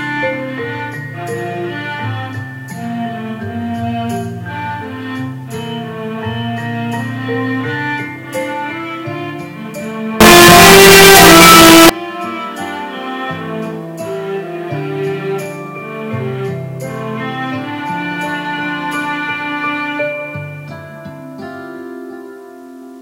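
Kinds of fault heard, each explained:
Signed and unsigned mixed up: from 10.2 to 11.9 s, very loud, harsh distortion swamps even the quiet parts, likely from 8-bit samples read with their top bit flipped.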